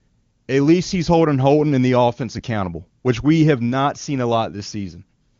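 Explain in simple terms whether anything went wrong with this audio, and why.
Nothing went wrong with this audio; the speech comes through the HD Voice phone connection without any faults to be heard.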